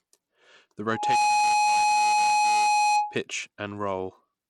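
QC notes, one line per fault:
throughout Bluetooth SBC compression. The speech is band-limited, with nothing above 11.9 kHz. Codec damage is plainly audible. The top sub-bands get few or no bits, so the treble is missing or flickers. The remaining bands are coarsely quantised, which leaves a gritty noise and some aliasing on the sound. This is likely SBC running with a small bit pool, which fits a low rate of around 96 kbps.
0.90–3.18 s loudspeaker feedback squeal. A single tone at 838 Hz rises out of the speech. It takes roughly a third of a second to swell, then sits about 10 dB above the speech. A microphone was picking up its own loudspeaker, and at that frequency the loop gain passed one. The tone kept feeding itself until it stopped at 3.18 s.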